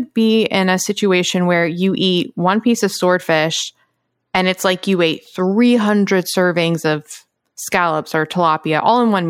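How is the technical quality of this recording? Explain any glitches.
No glitches turn up anywhere in the recording. The speech carries on without any audible technical fault, so there is nothing to explain.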